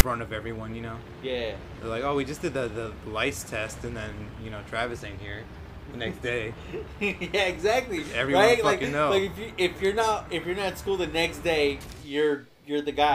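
Right at 0.0 s there's a click-like snap before the sound proper starts. That's file tags played as audio: a block of tag text at the head of the file got read as though it were samples. Because it's text, the values sit lopsided and offset to one side rather than centred like real audio. With a block only around 8 ms long, it's heard as a loud snap with hard edges.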